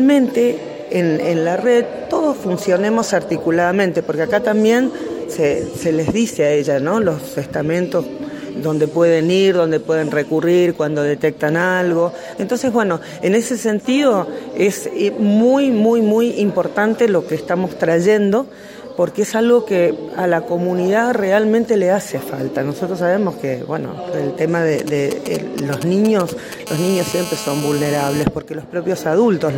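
From 24.79 s to 26.68 s the audio picks up GSM signalling bursts, a galloping dit-dit-dit of short buzzes roughly 10 dB below the programme. A nearby 2G phone in its signalling state sends only brief groups of radio bursts, and the audio circuit rectifies each group into sound. What sets this apart from the steady buzz that follows is the broken, rhythmic grouping, with gaps between clusters rather than a continuous tone. At 26.68 s the pattern becomes a continuous GSM phone buzz that lasts until 28.23 s, a hard, raspy tone about 12 dB below the signal. The phone is now transmitting as in a call, pulsing about 217 times a second, and rectification of those pulses produces a buzz at that rate with dense harmonics that bears no relation to the audio. Unlike mains hum, its fundamental sits at about 217 Hz rather than 50 or 60 Hz, and its edge is buzzy rather than smooth.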